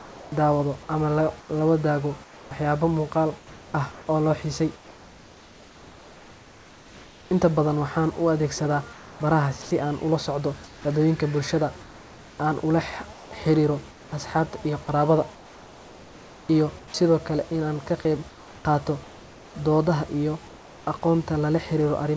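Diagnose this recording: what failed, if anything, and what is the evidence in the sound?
Call processing stage: discontinuous transmission likely halted sending during pauses, and the receiver synthesised comfort noise in place of the background. At 0.0–7.3 s, 8.93–10.85 s (before "dadweynka bulshada"), 13.13–16.94 s (after "aan ula", before "kale in aan ka") and 18.29–20.87 s, the room background flattens into steady, featureless hiss.

Also call processing: the voice detector likely mistook part of the sound for background and stopped transmission. The sound dropped by the voice detector spans 9.62–9.71 s: 90 ms of sound vanishes under the same steady comfort noise, returning once the detector triggers again.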